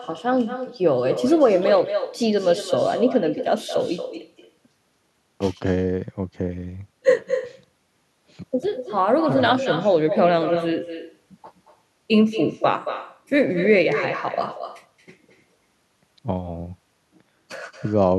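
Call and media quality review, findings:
Echo with no canceller, throughout the whole speech clip. Every phrase gets a quieter, thinner copy trailing it by about a fifth of a second, sitting roughly 9 dB below the talker. Probable component: far end on loudspeaker, its mic re-capturing our playback, with no echo cancellation stripping it before the return leg. Worth checking whether their canceller is disabled or bypassed.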